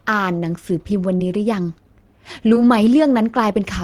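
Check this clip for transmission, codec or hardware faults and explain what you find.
Two brief transmission faults are audible, both short concealed packet loss. At 1.17 to 1.22 s and 2.54 to 2.57 s, about 20 ms of speech never reached the decoder in time. The receiver covered each gap by extending the preceding sound, then blended back, leaving a momentary smear or wobble. On a spectrogram, where the speech is voiced, the harmonics run flat and unchanging across the gap. On the waveform, where the speech is voiced, a short stretch repeats the preceding cycles before merging into the real signal.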